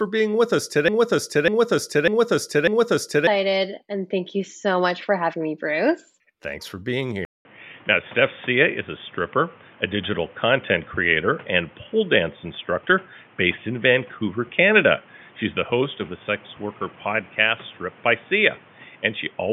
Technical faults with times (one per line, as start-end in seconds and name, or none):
0.88-3.27 broken-record loop
7.25-19.53 input switched to a poorer device